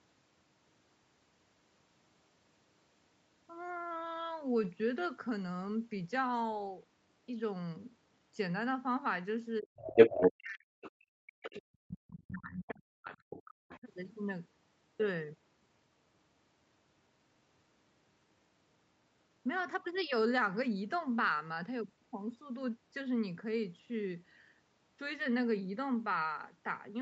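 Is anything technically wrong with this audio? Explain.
Yes. Between 9.61 and 13.88 s the speech is caught in a double-talk episode, and two faults overlap there.

Speech suppressed in double talk happens first from 9.61 to 9.86 s, then across most of 10.26 to 13.88 s. The far side is talking too, and the echo canceller likely can't tell this talker from its loudspeaker echo, so it pulls the level down by roughly 40 dB. On a waveform the envelope collapses in chunks, and a spectrogram shows speech energy blanking out.

The other side's voice leaking through comes in at 9.8 to 10.31 s, about 10 dB above the speech. After that it returns in short scraps at 10.81, 11.46, 12.27 to 12.74 and 13.12 to 13.8 s, roughly 10 to 15 dB below. The cause is likely residual echo the canceller missed. On a spectrogram these show as harmonic traces inside the suppressed gaps.

All of it sits under the call path's 8 kHz bandwidth ceiling.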